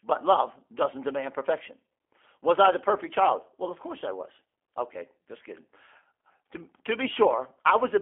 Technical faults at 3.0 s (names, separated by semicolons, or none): G.729 codec